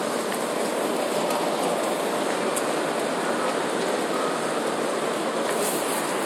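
No technical faults can be heard anywhere in this recording of sounds.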